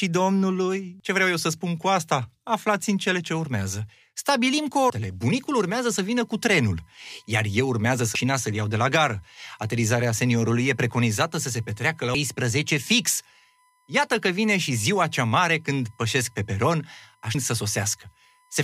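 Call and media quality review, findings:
Damaged data in a compressed stream: brief glitches at 1.0 s (just before "ce vreau eu să"), 4.90, 8.15, 12.15 and 17.35 s. The decoder loses frame sync.

USB whine: steady 1 kHz tone from 5.85 s to the end, faint, roughly 40 dB below the speech. USB frame-rate current is leaking through power or ground. Unlike mains hum, the pitch sits on the 1 ms frame rate, not 50/60 Hz harmonics.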